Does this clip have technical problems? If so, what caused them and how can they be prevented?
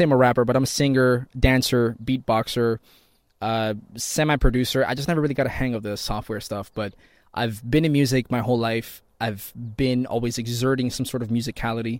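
Yes. At about 4.98 s there is a repeated buffer: one block of the speech plays twice in a row. The repeated piece lasts 5.8 ms, which fits a 256-sample buffer, so it is heard as a brief click with hard joins rather than an obvious stutter. No audio appears to be lost. The new buffer arrived late, and the device replayed the previous one. To prevent this, use a larger buffer or give the audio thread higher priority so every buffer arrives on time.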